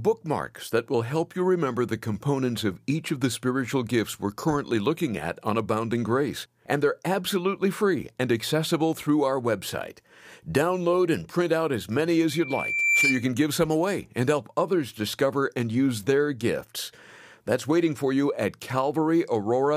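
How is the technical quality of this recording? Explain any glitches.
The recording has one clear glitch, a burst of loudspeaker feedback squeal. From 12.28 to 13.28 s, a microphone picking up its own loudspeaker lets a 2.4 kHz tone swell over roughly 0.7 s to about 5 dB above the speech. A spectrogram shows a bright horizontal line at 2.4 kHz, and the waveform's envelope visibly balloons.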